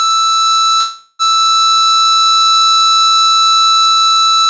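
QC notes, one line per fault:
0.80–1.22 s, call audio freeze: packets were likely held up in transit and the jitter buffer ran dry, so the receiver stretched the last music into a fading buzz or hiss for 0.39 s. Playback then resumes where it stopped, with nothing lost and everything after arriving 0.39 s late.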